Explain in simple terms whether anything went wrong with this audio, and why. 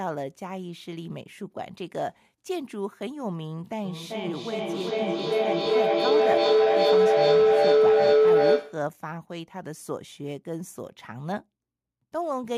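Feedback howl sets in at 3.84 s and lasts until 8.94 s, rising well above the speech. Sound from a loudspeaker reached a microphone on the same call and kept looping back louder, settling into a low tone of roughly 400 Hz that pulses a few times a second.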